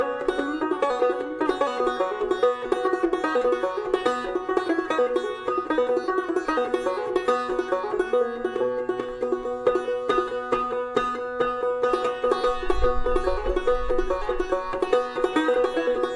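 From 12.5 to 14.5 s the audio carries regular ticks at 4 per second. This is a resampler restarted on every block. Each 250 ms block is converted separately, so every block edge gets a small error.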